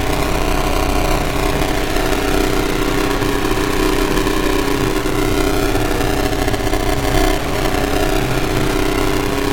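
Buffer tearing runs through the whole clip. The software filling the ring buffer and the hardware draining it have drifted out of step, so they cross inside every period, which fits a 128-sample buffer. About two fifths of each block therefore carries stale audio from roughly ten milliseconds earlier, with hard joins either side. Those joins repeat at 345 Hz, laying a robotic buzz over the sounds that is present only while there is signal.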